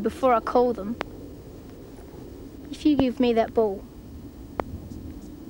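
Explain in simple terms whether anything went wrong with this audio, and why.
Something did go wrong. There are three loud pops, at 1.01 to 1.03 s, 3.00 to 3.02 s and 4.60 to 4.62 s. Each is a single sharp click, far louder than the sound around it, and over in about two hundredths of a second. The audio keeps playing underneath. A pop like this is likely a sudden jolt of electricity, from a plug, a switch or static, getting into the signal.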